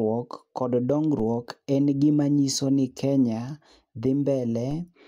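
At 1.20 s and again at 4.71 s, a DC step shifts the waveform's zero line by about -31 dBFS, heard as a low thump beneath unchanged speech. Unlike a click, the offset lingers and then decays, as a 5 Hz high-pass drains it.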